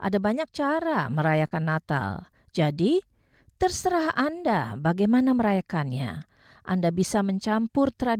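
At 1.47 s, just after "banyak cara", there is a short concealed packet loss lasting until 1.53 s. About 40 ms of audio arrived too late. The receiver filled roughly 37 ms by extending the preceding sound. It is heard as a brief smear before normal audio resumes.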